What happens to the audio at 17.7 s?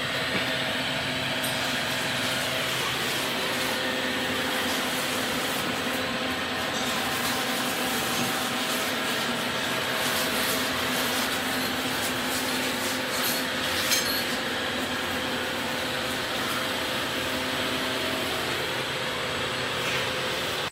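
At 17.7 s a USB whine sits under the sound, as it does for the whole clip. It is a steady, high tone at 8 kHz. The bus draws current in 125-microsecond microframes, and that ripple leaks in through power or ground. It stays roughly 25 dB below the sound.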